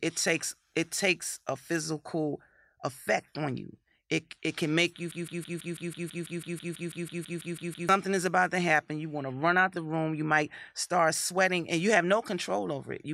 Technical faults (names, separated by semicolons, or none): broken-record loop